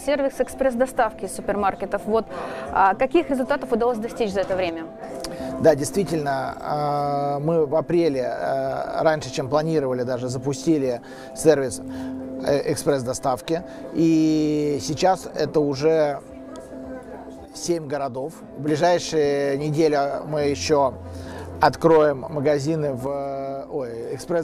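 One channel drops out, likely, at 4.69 to 5.02 s, 17.45 to 18.68 s, and from 23.07 s to the end. Each time the level falls abruptly by about 6 dB, recovering after the first two, which fits losing one of two matching channels before the mono sum.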